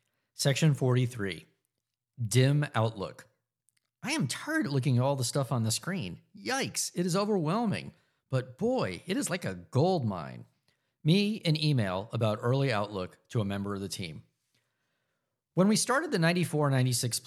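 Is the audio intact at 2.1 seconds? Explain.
Yes, the speech is intact at 2.1 s, with no dropout, click, distortion or other fault at that moment.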